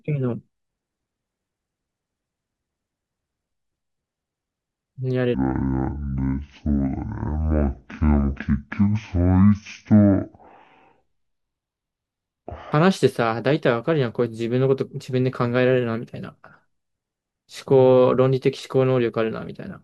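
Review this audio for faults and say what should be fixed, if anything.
From 5.34 s to 12.72 s the speech falls into a section at the wrong speed, running at 0.54 times normal, so it sounds about ten semitones lower and drags. Pitch and tempo drop together, unlike a pitch shift or time-stretch, pointing to a likely clock mismatch during editing or playback. Match sample-rate settings at every stage so the section plays back at its recorded rate.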